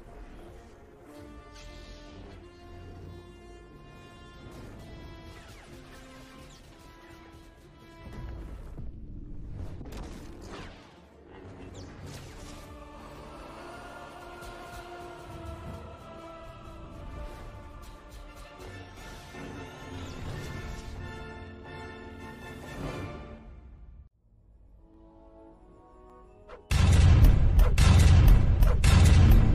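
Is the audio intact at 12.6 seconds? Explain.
No. At 12.6 seconds the audio sits inside a run of clock drift buffer slips, heard from 0.7 to 28.41 s. A click recurs about every 1.15 s. Two devices' clocks likely disagree by roughly 300 ppm, so about 15 samples are periodically dropped or repeated.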